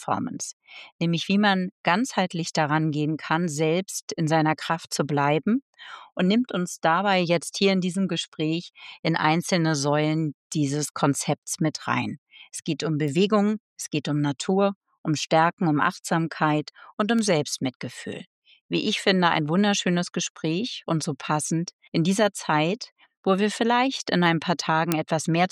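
Bit error spikes occur at 13.08 s, 17.19 s and 24.92 s. Each is a single corrupted bit forcing the value to jump by a power of two and snap back, heard as an isolated, broadband tick unrelated to the surrounding sound. The one at 17.19 s spans three adjacent samples.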